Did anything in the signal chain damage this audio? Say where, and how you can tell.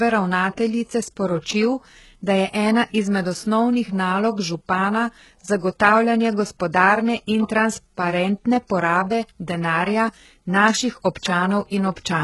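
Yes, at the codec stage, throughout the speech: s sounds turn gritty and lispy, and nothing sits above 11.5 kHz. The treble is present but synthetic, so this is likely HE-AAC band replication at a heavily damaged very low bitrate near 12 kbps, not a plain low-pass filter.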